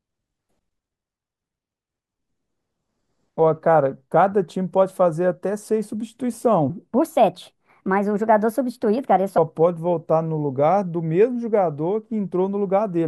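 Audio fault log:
6.70–9.38 s, section at the wrong speed: this stretch was likely played back against the wrong clock, running at 1.34 times its recorded rate while the surrounding speech stays at normal speed. Because speed and pitch are locked together in plain resampling, the speech jumps up by about five semitones and turns hurried and chipmunk-like at 6.70 s, then drops abruptly back to its natural pace and pitch at 9.38 s.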